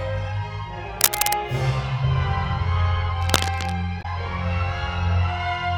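From 1.01 to 1.33 s a burst of dense, uneven scratching sits well above the sound. It returns more quietly, a little below the sound, from 3.21 to 3.75 s. This is cable scratch noise, likely from a worn cable or connector being moved while its contact resistance flickers. Unlike a codec error, it rustles over continuous audio without any jump. At 3.99 to 4.06 s a short disturbance marks damaged data in a compressed stream. The decoder misreads corrupt frames and resyncs at the next frame header.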